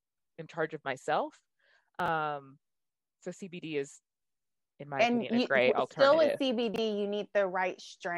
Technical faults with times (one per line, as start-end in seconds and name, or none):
2.00-2.08 chunks out of order
6.74-6.78 chunks out of order